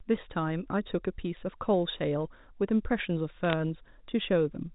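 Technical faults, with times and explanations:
3.45 to 3.53 s, bit errors on a digital phone line: a brief burst of sharp ticks and crackle lands on the speech. Flipped bits on the A-law line each corrupt one sample, at a rate of a fraction of a percent, and hits on sign or high bits jump hardest.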